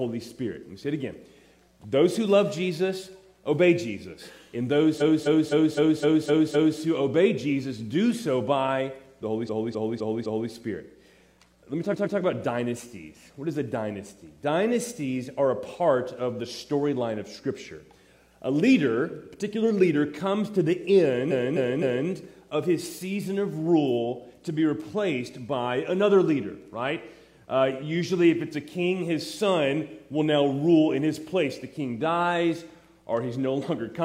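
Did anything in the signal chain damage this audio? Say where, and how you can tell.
Yes. The sound stutters, replaying one short block again and again at 4.97–6.76 s, 9.45–10.48 s, 11.88–12.14 s and 21.27–22.04 s. These are repeated frames at the codec or storage stage: a 256 ms block (128 ms at 11.88 s) was written repeatedly, lengthening the audio.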